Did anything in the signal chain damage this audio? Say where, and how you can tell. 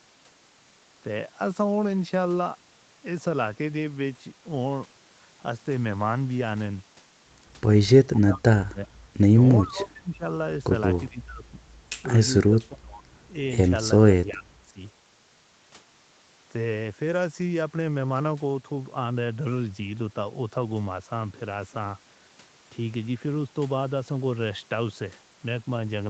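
Yes, in call processing: speech ducks by about 20 to 30 dB at 8.02, 9.61, 11.09, 12.46 and 14.07 s, likely speech suppressed in double talk by the echo canceller.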